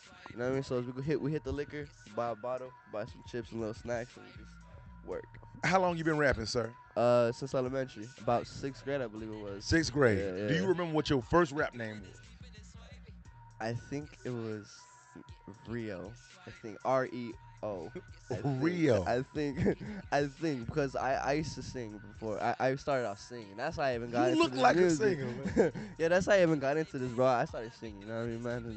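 Nothing goes wrong anywhere in the audio, and the traces of the call path it came through are the codec's usual coding noise and a lack of top end above roughly 8 kHz, which fits an Opus link set to that bandwidth.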